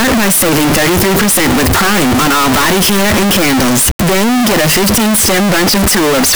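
Speech runs through the whole clip as a loud, harsh, buzzing block, with background noise as loud as the talking. The waveform is nearly square at an almost fixed, high level. This is float read as integer, likely 32-bit float samples decoded as 32-bit integers, so sign and exponent bits set the level. Ordinary clipping only flattens peaks and leaves quiet stretches quiet, but here even silence is loud. Pitch can still be followed.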